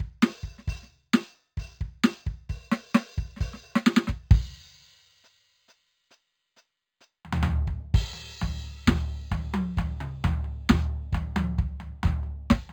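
Music, with imaging from linear upsampling throughout: the rate was raised by straight-line interpolation, which fits a step from 11 kHz to 44.1 kHz. The top is dulled, and a mirrored copy of the spectrum sits roughly 30 dB down between about 5.5 and 11 kHz, adding a faint metallic shimmer to bright, high material.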